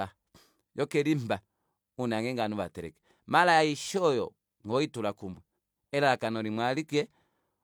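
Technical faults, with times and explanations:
No technical faults can be heard anywhere in this speech recording.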